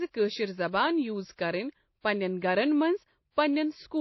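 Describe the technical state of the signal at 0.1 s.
At 0.1 s the signal shows transcoding between lossy codecs, present throughout: a low-rate MP3 stage (consistent with 24 kbit/s) was likely re-encoded as WMA (consistent with 64 kbit/s). The second encoder wastes bits copying the first's artefacts and adds its own. The speech sounds layered, with nothing above 5.8 kHz.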